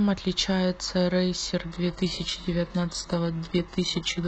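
At 1.63 s the speech abruptly drops in quality and stays degraded through the end of the clip, with no gap at the switch. This is an adaptive stream at a lower bitrate: the player fell back to a much leaner encoding. Codec artefacts rise. That sound fits a switch from a full-band AAC stream to a very low-bitrate HE-AAC one.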